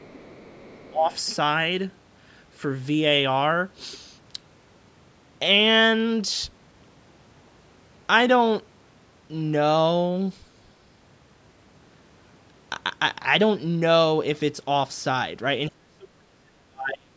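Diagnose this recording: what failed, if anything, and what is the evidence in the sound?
A faint second voice, roughly 30 dB down, runs from 0.0 to 0.9 s. This is the other side's voice leaking through, likely echo the call's canceller missed.

The talker dips by about 15 dB from 0.9 to 1.11 s and nearly vanishes from 15.68 to 17.16 s. This is speech suppressed in double talk, likely the canceller ducking both sides.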